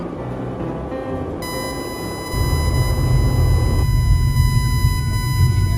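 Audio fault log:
1.42 s to end: USB whine. Current drawn by the USB bus in 1 ms frames is leaking into the audio path through shared power or ground, so each frame pulls the supply by a small amount at a steady 1000 Hz rate. That turns into a fixed-pitch whine centred at 1 kHz, entering at 1.42 s and holding until the clip stops. It sits at roughly 10 dB below the wanted signal.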